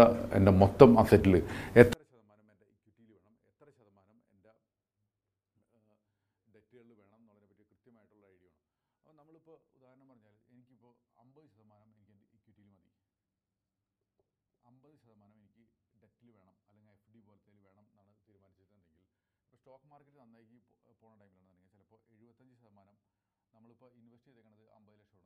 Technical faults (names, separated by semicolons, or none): 24-bit alignment error (too quiet)